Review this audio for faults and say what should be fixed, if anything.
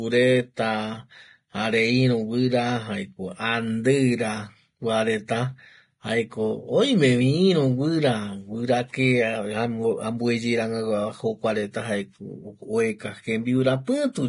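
Throughout the speech, the sound is hissy and grainy, with rough tones and soft consonant attacks. Nothing is present above about 10.6 kHz. The damage is heavy. The likely cause is Vorbis compression at low quality. At this setting the codec lowers its cut-off and quantises the treble so coarsely that fine detail turns into noise. The sound fits a bitrate near 30 kbps. To prevent this, encode at a higher Vorbis quality or keep a lossless master.

At 13.85 to 13.87 s there is pre-echo. A short hiss arrives just before a sharp attack, and the onset sounds smeared. The smear spreads over about 27 ms. The attack fell late in a transform block. The codec spread its quantisation noise across the whole block, so noise sized for the loud onset also filled the quiet gap before it. To prevent this, raise the bitrate or use an encoder setting that switches to short blocks on transients.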